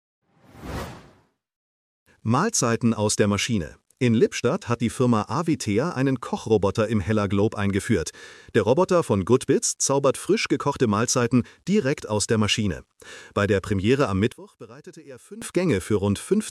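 One channel inverted, from 14.32 to 15.42 s: for about 1.1 s the audio collapses, dropping by about 21 dB before recovering. This is likely one stereo channel with reversed polarity, so when the pair is summed to mono the material common to both sides cancels out. Centred content largely disappears, leaving only the weak difference signal between the two channels.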